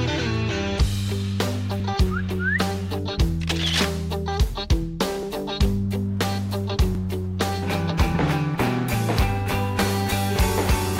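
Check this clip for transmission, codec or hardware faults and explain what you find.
Clock drift buffer slips occur from 1.8 s to 10.39 s, as a click or pop repeating every 1.71 s. The likely cause is two devices on independent clocks, mismatched by roughly 0.1 %, so the buffer between them periodically drops or repeats roughly 70 samples.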